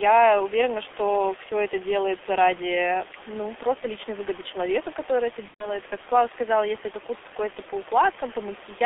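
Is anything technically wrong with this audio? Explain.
Yes. Throughout, the speech carries heavy G.723.1 codec damage: it is confined to roughly 300 Hz to 3.5 kHz and sounds hoarse and muffled, with smeared consonants. That fits a coder running at about 6 kbit/s with a slowly updated voice model, not plain band-limiting, which would stay clean.

From 5.48 to 5.76 s there is VoIP packet loss concealed by the speech codec. The decoder extends the last pitch and filter into a fading sound, which fits about four lost 30 ms frames. With four frames lost in a row, the codec mutes from the third, so the sound briefly falls silent, and it stays weak after the packets return. The room noise, about 16 dB below the speech, is part of the recording.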